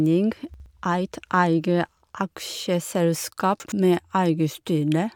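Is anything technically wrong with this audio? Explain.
Yes. The speech has chunks out of order twice, at 0.54 to 0.66 s and at 3.60 to 3.72 s. In each case a 60 ms block of audio was delivered or written one chunk late, so it plays after the block that should follow it. Nothing is missing, but the two swapped pieces create three abrupt splice points within 120 ms. Each one is heard as a brief jumbled stutter in the speech.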